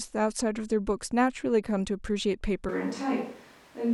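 At 2.69 s the speech abruptly turns roomy and hollow, loses its low end, and drops roughly 5 dB in level, while background room noise becomes more noticeable, sitting about 30 dB under the speech. The change is sudden and persists to the end of the clip. This is a switch to a distant microphone, most likely because the close microphone's feed dropped out and a mic further from the speaker, picking up more of the room, took over.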